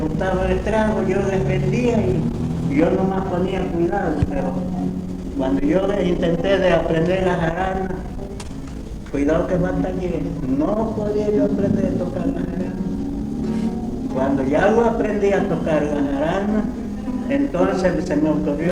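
There are no technical faults to describe, so there is nothing to place in time order.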